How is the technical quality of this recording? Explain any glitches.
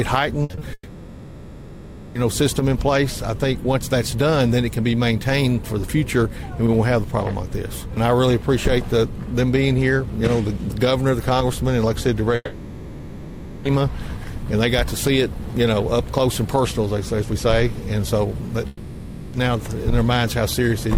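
The recording has clear network faults. Two kinds of glitch occur.

From 0.43 to 0.63 s there is repeated packet loss, which gives a robotic sound. Four short gaps hit this 0.2-second stretch, the longest about 60 ms. The receiver patched each gap by extending the last bit of audio. About 60 percent of the span is this patched sound. It sounds choppy, with pieces missing.

Three long network dropouts follow, each likely caused by a stretch where no packets arrived. The first runs from 0.73 to 2.17 s, the second from 12.35 to 13.67 s, and the third from 18.67 to 19.35 s. The receiver extended the last sound across nearly every gap. It becomes a smeared, fading buzz. The first two end in a brief silence, about 40 and 30 ms long. The audio resumes later, and the lost stretch never returns.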